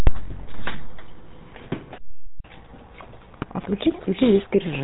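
The speech runs through the GSM full-rate codec for its whole length. The codec models the vocal tract, excites it with regularly spaced pulses, and discards everything above 4 kHz. The result is a dull, band-limited sound with a plainly audible buzzy, gravelly roughness, consistent with 13 kbps full-rate coding. From 3.33 to 3.45 s, GSM bit errors corrupt the decoder's filter, pitch and gain parameters over several consecutive frames, which points to a bit error rate near 1 percent. This produces a short burst of squawking, popping and gargling distortion with erratic level.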